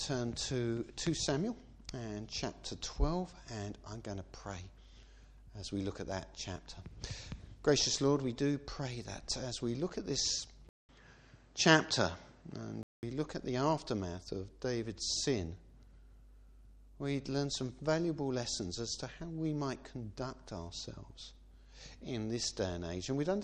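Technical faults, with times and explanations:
10.69 to 13.03 s, input switched to a poorer device: the sound drops out for about 200 ms, then returns duller and boxier, with nothing above about 8.2 kHz, a level shift of roughly 5 dB and a faint new background noise about 40 dB below the signal. The likely cause is the recorder moving to a different, narrower-band microphone or headset profile, whose own response, gain and noise floor replace the original's until the sound clears again at 13.03 s.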